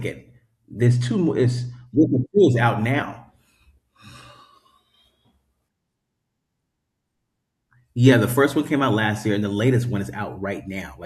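Channel delay (comb filtering) runs from 0.87 to 1.87 s in the speech. One channel lags the other by roughly two samples, a small fraction of a millisecond, and summing to mono cancels energy at spaced frequencies. The first notch falls around 10 kHz, so the top end sounds dulled.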